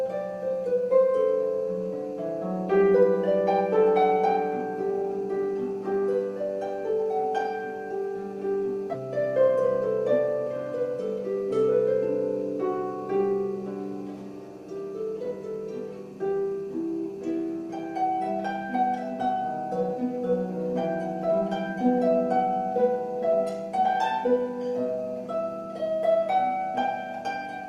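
At 8.93 s the audio skips ahead. About a third of a second of sound is missing. It was dropped while later audio was already queued. The two sides are joined almost directly, with only 15 ms added, so playback lurches forward.

From 9.48 to 10.2 s a jitter buffer speed-up follows. The buffer held more audio than its target. Small pitch-period pieces were cut repeatedly, trimming roughly 50 ms. The sound runs at 107% speed with unchanged pitch and feels slightly hurried.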